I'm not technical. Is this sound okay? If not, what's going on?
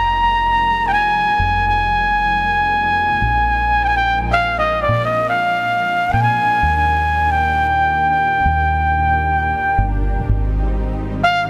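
No. From 4.94 to 7.68 seconds there's a mains buzz: a steady, raspy hum that sits well under the main sound. Electrical interference from the 60 Hz power supply is leaking in as sharp spikes, twice per cycle, which adds gritty overtones climbing into the kilohertz range.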